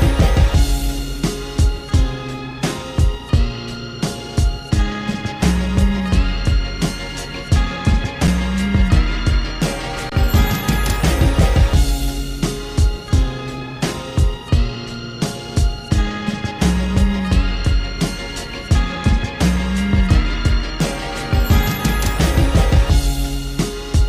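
Underrun with held sample at 8.27 s and again from 10.10 to 10.12 s: the audio freezes on a flat, held level, first for about 6 ms, then for about 23 ms, which fits a 256-sample and then a 1024-sample buffer gap. The output buffer ran dry and the converter kept repeating its last value until data arrived. Since essentially nothing was lost, the sound resumes where it paused.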